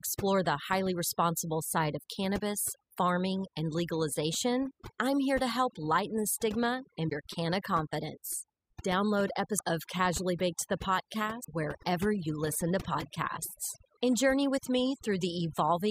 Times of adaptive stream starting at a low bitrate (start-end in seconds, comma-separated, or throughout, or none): none